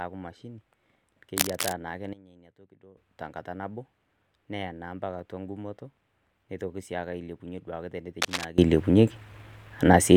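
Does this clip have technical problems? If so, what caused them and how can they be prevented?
Yes. Cable scratch noise appears from 1.37 to 1.73 s and from 8.22 to 8.45 s: dense, ragged bursts somewhat louder than the speech, likely from a worn connector or cable whose contact resistance fluctuated as it moved. Unlike a single click, it scratches continuously. Replacing worn leads and securing connectors prevents it.

A sudden gain jump drops the level by about 17 dB from 2.13 to 2.97 s, then raises it by about 22 dB from 8.58 s to the end. The likely cause is a digital gain change applied instantly, without a ramp. Background noise shifts along with the speech, so it is not a fade or a quieter talker. Ramping gain changes smoothly prevents it.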